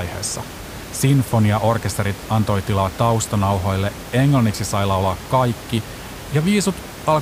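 Nothing stood out on listening to this speech clip, with the room's background noise sitting about 15 dB below the speech.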